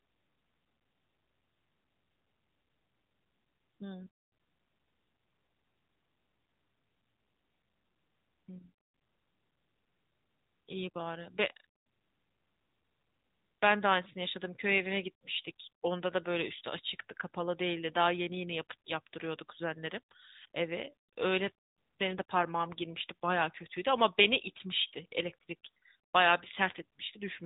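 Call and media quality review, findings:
AMR narrowband mobile codec, whole clip. Nothing above 3.8 kHz. Plainly buzzy, synthetic speech from pulse-driven vocal-tract coding. Damage fits a mid-rate mode near 10.2 kbps.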